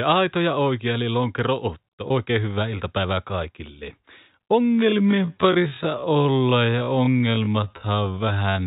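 At 2.08 to 2.10 s there's a brief packet loss with pitch repetition. About 20 ms of audio went missing, which fits a single lost packet, and the receiver covered it by replaying the last pitch period, so you hear a slightly held, buzzy blip before the speech picks up again.

From 4.56 s to the end the pace suddenly drops to roughly half speed, about 0.53 times the original, while the pitch stays put. The speech drags. The likely cause is a time-stretched section, where software lengthened the audio by repeating short pieces. Through all of this the G.711 mu-law telephone band is still audible, with nothing above 4 kHz.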